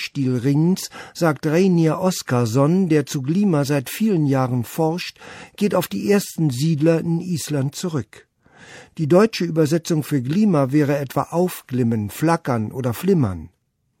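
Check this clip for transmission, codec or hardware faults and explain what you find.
Checking this clip turns up no faults to explain.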